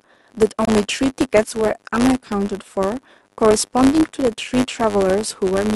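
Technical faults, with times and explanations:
throughout: Filter restarted on every block. A steady buzz at 100 Hz sits under the speech for the whole clip. A filter in the chain loses its memory at each block boundary and starts again from silence. Each restart leaves a tiny transient, so the ticks arrive 100 times a second, which points to blocks of about 10 ms. The buzz grows with louder speech and fades in quieter stretches, because each transient scales with the signal level.
0.65 to 0.69 s: Corrupt frame muted. The speech drops out abruptly for about 42 ms and leaves pure silence. Damaged compressed data was rejected by the decoder, and the player filled that slot with nothing. The gap's length fits two consecutive frames of about 21 ms each being refused. The speech after the hole resumes on time, because the silence stands in for the lost audio rather than pushing the rest later.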